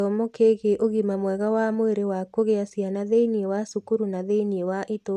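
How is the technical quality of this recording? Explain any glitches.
No glitches can be heard anywhere in the recording, and its technical quality raises no concerns. The speech continues without any interruption or disturbance to explain.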